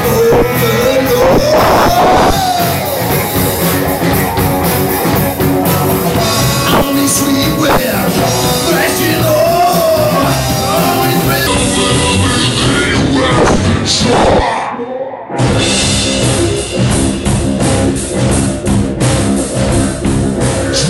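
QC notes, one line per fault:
11.47–20.89 s, section at the wrong speed: runs at about 0.72x to the end, pitch dropping around five semitones, sounding deep and dragged, likely a wrong-clock playback or edit.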